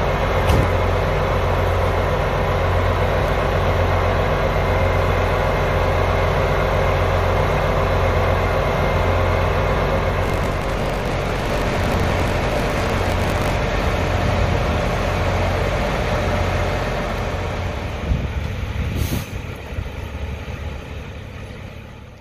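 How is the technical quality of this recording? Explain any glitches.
The recording has one glitch. From 10.2 to 13.6 s, a robotic 50 Hz buzz rides on the sound: buffer tearing, where playback and writing slipped, splicing in a small slice of audio from roughly 70 ms earlier.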